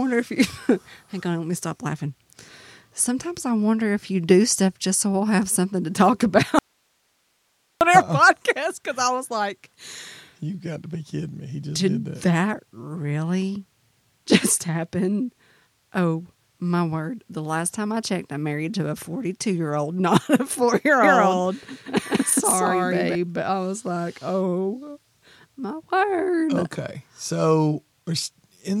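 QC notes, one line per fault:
6.59–7.81 s, audio dropout to a faint residue: the signal path likely broke while the line stayed live, so the speech vanishes abruptly for 1.22 s, leaving only hiss roughly 45 dB down.
21.01–23.15 s, doubled audio track: a second copy was likely captured through a slower path, so after "not a four year" the speech repeats at equal level about a fifth of a second late, dry and full-band, stopping sharply before "but I was like".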